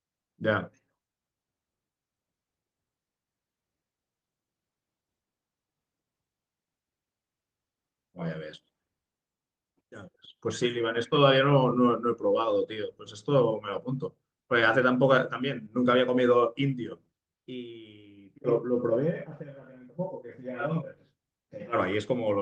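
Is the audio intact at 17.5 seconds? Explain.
Yes, the audio is intact at 17.5 seconds, with only the light coloration of the Opus voice compression running across the clip.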